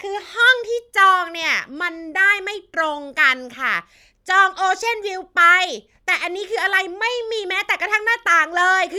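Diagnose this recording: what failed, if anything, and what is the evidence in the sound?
Nothing in the recording stood out as a fault on listening.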